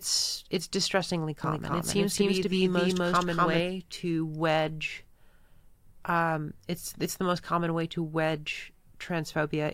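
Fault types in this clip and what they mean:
Doubled audio track: after "it's distressingly", an equally loud copy trails about a third of a second behind without decaying, unlike an echo; likely a duplicated capture.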